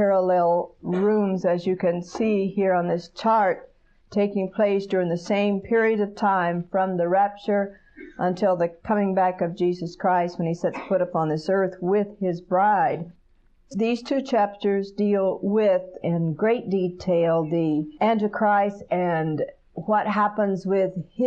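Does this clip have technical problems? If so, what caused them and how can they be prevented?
No, there are no technical problems in this clip.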